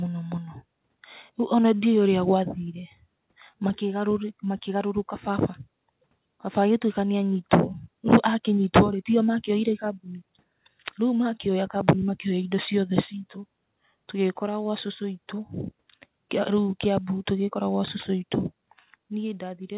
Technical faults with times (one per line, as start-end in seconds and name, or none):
none